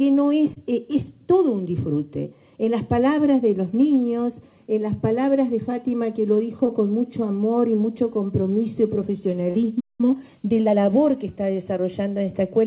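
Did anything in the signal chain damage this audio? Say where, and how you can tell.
Yes. At the network stage, four short gaps were concealed by the decoder: about 20 ms each at 0.54, 2.64 and 6.66 s, and about 40 ms at 9.50 s. Each is a short concealed packet loss. The decoder extends the preceding sound across the hole and cross-fades back, so you hear a brief smear or wobble. On a spectrogram the harmonics stretch flat and unnaturally steady for that instant. Above all of this sits the 4 kHz ceiling of the call path, which fits G.711 A-law.

At the playback stage, the output goes completely silent from 9.80 to 10.01 s, roughly 190 ms, in mid-flow. This is a playback stall, likely from the output buffer running dry or its thread being blocked. The waveform drops to a flat line, and the spectrogram shows a clean vertical blank band.

Right after the stall, from 10.01 to 10.77 s, the player works off its backlog with a time-compressed catch-up. 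It plays about 1.25 times faster, so the audio sounds hurried but keeps its normal pitch. On a spectrogram, events crowd closer together while the harmonic spacing stays unchanged.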